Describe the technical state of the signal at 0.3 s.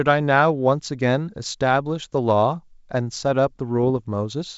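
At 0.3 s the speech is intact, carried through G.722 wideband telephone coding at 64 kbit/s with no more than faint coding damage.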